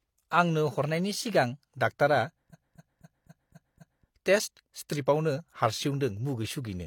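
From 0.82 to 1.61 s the speech runs about 5.9% fast and rises roughly a semitone (99 cents), then snaps back: likely a drift correction step. On a spectrogram the harmonics jump upward as one block, then drop back to their earlier spacing.

From 2.49 to 4.03 s, repeated frames make the audio stutter, looping the same 256 ms segment six more times and adding about 1.54 s. The waveform shows identical blocks tiled side by side.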